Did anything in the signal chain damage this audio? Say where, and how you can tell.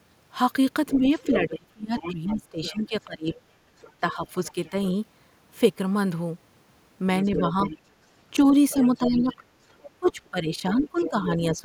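Yes. The damage happened in call processing. There is audible other side's voice leaking through from 0.87 to 4.85 s, from 7.22 to 7.78 s and from 8.7 to 11.22 s. The leaked voice sits roughly 20 dB, 10 dB and 15 dB below the talker in those three stretches. The likely cause is an echo canceller that left part of the loudspeaker signal in the microphone path. On a spectrogram this shows as a second, fainter set of harmonic traces running under and between the main voice.

The second fault is speech suppressed in double talk, from 0.99 to 4.75 s and from 7.29 s to the end of the clip. These spans line up with the leakage, which means both sides were talking at once. The talker's level dips by up to about 20 dB in the first span and about 15 dB in the second, for roughly two seconds in each. This is likely the canceller attenuating everything it could not separate. The waveform shows sudden envelope troughs, and the spectrogram shows the upper bands thinning or gapping in patches.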